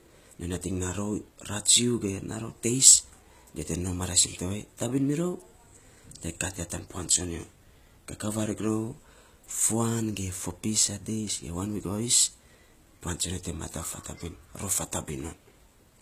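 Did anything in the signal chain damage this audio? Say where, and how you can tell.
Yes. HE-AAC compression throughout, at the codec stage: treble above 14.9 kHz is missing and the s sounds turn gritty, likely from spectral band replication at a very low bitrate around 20 kbps.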